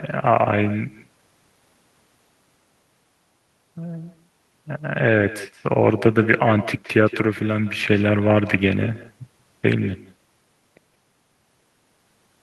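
Echo with no canceller runs throughout the speech: the far end's loudspeaker feeds its microphone and nothing removes the pickup, so every phrase returns after a network round trip of roughly 150 ms, about 16 dB down, as a thinner shadow trailing the original.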